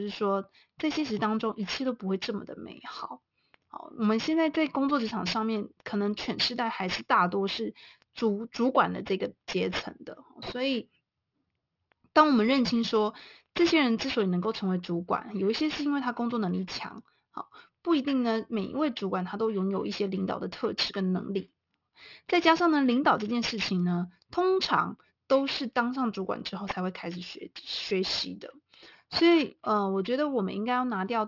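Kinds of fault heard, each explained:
Aliasing: The speech was resampled downward without a filter guarding the new limit, which fits a drop to a 12 kHz rate. Energy above 6 kHz folds back below it at wrong pitches, roughly 15 dB under the speech. Sibilants sound gritty and metallic throughout.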